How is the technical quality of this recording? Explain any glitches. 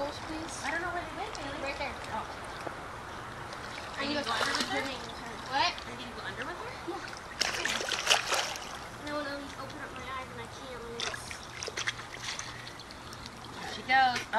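No technical faults are audible.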